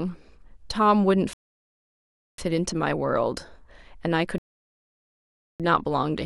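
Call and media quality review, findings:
Speech drops to dead silence at 1.33 s, resumes at 2.38 s from the exact point it stopped. About 1.05 s added, nothing skipped. Rebuffering stall: playback buffer drained, player paused until new audio arrived.

Same symptom at 4.38 s to 5.60 s, about 1.22 s of silence, speech picks up seamlessly. Second rebuffering stall; delivery again fell behind playback, likely network or CDN throughput dips rather than decoder trouble.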